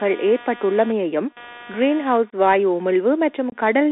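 Computer activity noise runs throughout: processor or peripheral load disturbs the shared ground, adding a buzz pulsing at roughly 200 Hz, about 25 dB below the speech. The Bluetooth CVSD headset codec also runs the whole way, confining speech to 250 Hz–3.6 kHz. Its one-bit adaptive steps, which fit a 64 kbit/s link, plainly roughen sibilants and leave granular hiss. Unconcealed Bluetooth headset packet loss hits at 2.30 s and 3.50 s. Each time a few voice packets vanish, cutting a 22.5 ms hole with abrupt edges.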